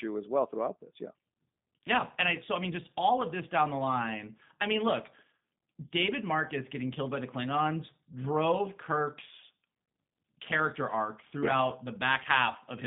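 Throughout, G.729 codec coding, consistent with 8 kbit/s, rebuilds speech from filter, pitch and pulse parameters; nothing passes above 3.8 kHz, leaving a rough, synthetic, band-limited sound.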